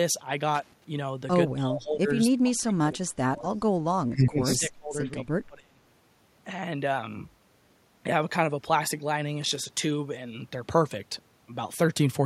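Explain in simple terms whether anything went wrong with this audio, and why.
Loose connector crackle appears twice, from 0.55 to 0.84 s and again from 9.42 to 9.69 s. Each time there's a short, uneven burst of scratchy crackling over the speech. This happens when a worn or dirty plug or socket keeps losing and regaining contact as it shifts, so the sound is chopped into tiny fragments and small clicks pile up into that rough, broken texture.

Speech suppressed in double talk shows up four times: 1.56 to 2.09 s, 2.29 to 3.65 s, 4.03 to 5.09 s, and 5.28 to 5.81 s. In these stretches the voice suddenly drops sharply in loudness, at times almost vanishing, and comes back in pieces. The likely cause is a call's echo canceller, which turns the line down to stop echo but here also muted the talker while both sides spoke at once.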